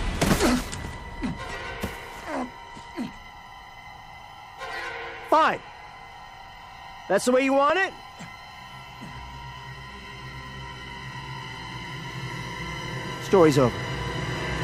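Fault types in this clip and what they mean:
Periodic USB or driver dropouts: something in the background keeps stalling the USB link or the audio driver on a fixed schedule, so a tiny slice of audio just gets skipped each time rather than filled in. Here you get a tick roughly every 1.02 s from about 4.64 s to 9.75 s, around seven in all, each losing a couple of milliseconds. They're evenly spaced and only audible against the signal.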